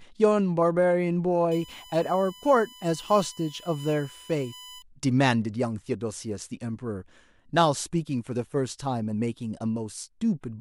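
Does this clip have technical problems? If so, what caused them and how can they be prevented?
Yes. From 1.51 to 4.82 s the speech carries USB whine, a steady fixed-pitch tone at 1 kHz, strongest at its 3 kHz harmonic, sitting around 20 dB below the speech. The bus's 1 ms frame timing pulls current in regular bursts, and that ripple leaks into the audio through shared power or ground. A spectrogram shows thin horizontal lines at 1, 2 and 3 kHz, brightest at 3 kHz. Powering the interface separately or adding a ground-loop isolator prevents it.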